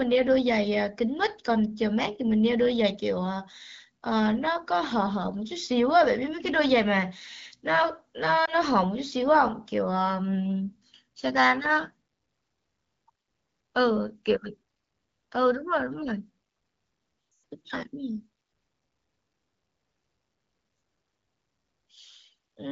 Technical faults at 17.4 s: lost AMR speech frames

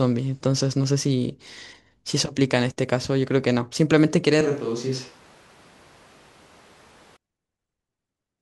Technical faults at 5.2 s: switch to a distant microphone

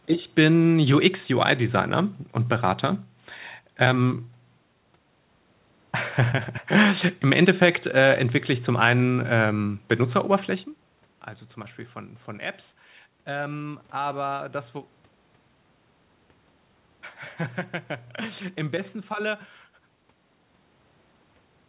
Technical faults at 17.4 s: none

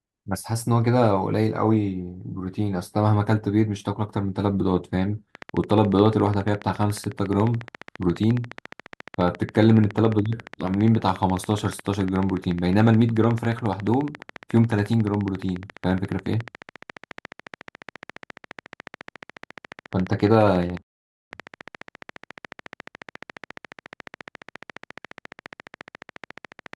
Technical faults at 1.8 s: none

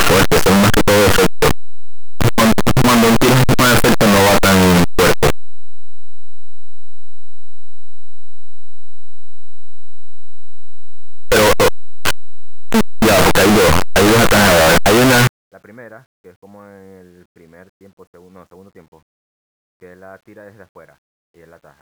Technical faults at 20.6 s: none

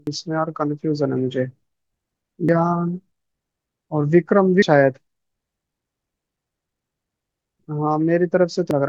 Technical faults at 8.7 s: damaged data in a compressed stream

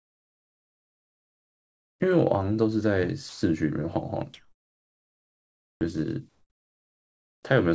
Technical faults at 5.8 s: comfort noise in place of the background; onset clipped by the voice detector

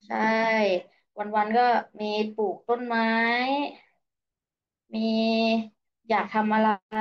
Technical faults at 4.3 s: none

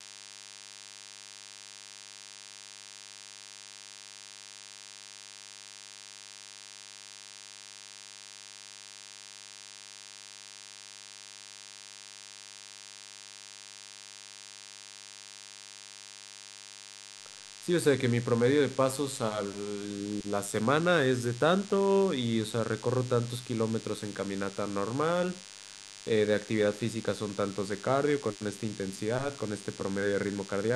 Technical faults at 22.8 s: DECT cordless phone buzz

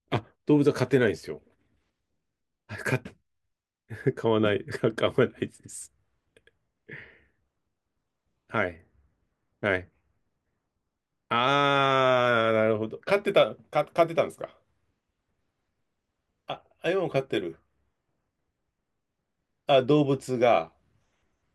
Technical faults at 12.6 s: none

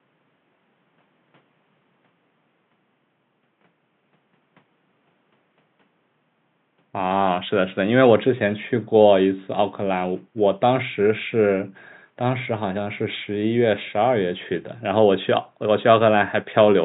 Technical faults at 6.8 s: none

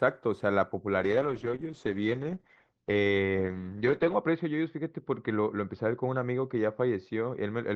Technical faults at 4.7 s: call bitrate drop

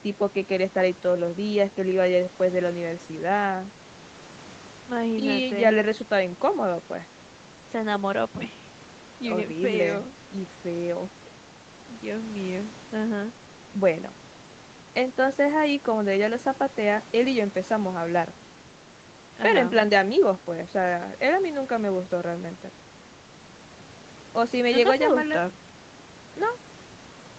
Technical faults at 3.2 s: none

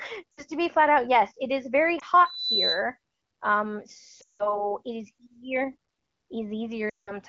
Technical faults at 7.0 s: lost AMR speech frames

